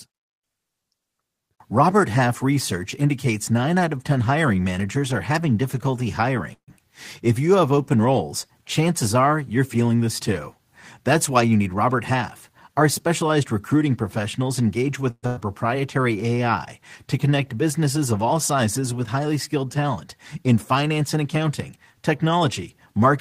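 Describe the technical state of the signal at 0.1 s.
At 0.1 s the speech signal is intact, with no technical fault present at that moment.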